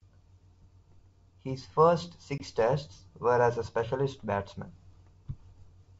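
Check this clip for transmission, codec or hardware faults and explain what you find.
One transmission fault is present: packet loss on an ADPCM call. The audio is speech, carried over G.722 wideband coding, which stays clear up to about 7 kHz.

From 2.38 to 2.43 s the speech drops into a hard-edged silent gap. About 20 ms of audio is missing, which fits roughly one lost packet. The decoder then loses track of the sender's adaptive predictor and step size. When the speech returns, it is slightly distorted. It settles within a few tens of milliseconds.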